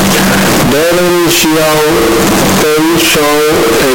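From start to end, the speech is extremely loud and harsh. The waveform sits at an almost fixed, high level and is almost square, and background noise is as loud as the speech. Pitch can still be followed. This points to float read as integer, likely 32-bit float samples decoded as 32-bit integers.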